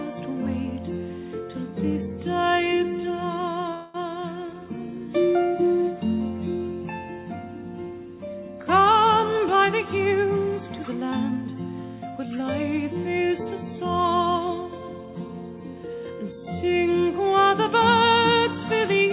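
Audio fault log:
3.74 to 3.96 s, call audio freeze: The sound stalls for about 0.2 s. The last moment carries on as a fading buzz rather than dropping to silence. Then the audio resumes exactly where it stopped, with nothing lost. The likely cause is packets held up in transit, so the jitter buffer ran dry and the receiver stretched what it had. The pause pushes everything after it about 0.2 s later.
9.30 to 11.04 s, jitter buffer speed-up: The audio runs at about 112 percent of normal speed, with its pitch unchanged, so this stretch sounds hurried. The receiver was holding more audio than it wanted, as after a late burst of packets. To shed the extra delay, it cut out many short pieces, each one or a few pitch periods long. In total about a fifth of a second is trimmed away, which is heard as a rushed passage.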